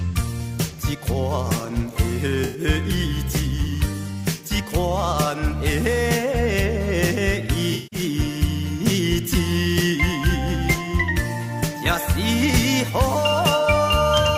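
Around 2.44 to 2.60 s there's AAC frame loss with concealment: roughly 107 ms of data goes missing, which fits about five frames, and the decoder papers over it by reusing the last good spectrum, so you get a smeared, noisy patch. A longer one hits from 7.71 to 8.00 s, about 192 ms lost, scattered over roughly 213 ms, with one run near 150 ms.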